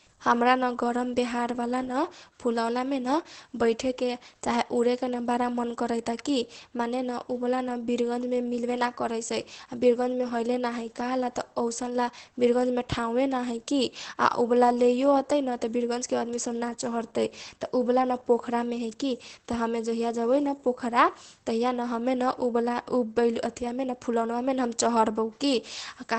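Throughout, the speech sounds muffled and hoarse, with a slightly robotic edge and nothing above 8.3 kHz. This is Opus voice compression in its wideband SILK mode, coarsely coding the excitation at a rate that fits roughly 12 kbps.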